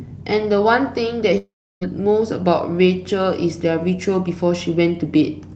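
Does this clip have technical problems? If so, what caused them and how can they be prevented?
Yes. From 1.37 s to 1.83 s the audio breaks off. The last sound is carried on as a fading buzz or hiss, which settles into silence for roughly the final 0.32 s before the audio resumes. About 0.44 s of material is gone. The likely cause is a long network dropout on the Opus call path, where concealment can only extrapolate briefly before muting. Preventing it means securing the network link, for example with a wired connection, QoS prioritisation or redundant transmission.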